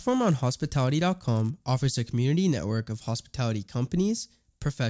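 A resampler restarted on every block spoils this speech clip from 0.0 to 1.5 s, before "offers a community network". Each 10 ms block converted from 44.1 kHz to 16 kHz gets edge errors, giving a 100 Hz buzz under the signal.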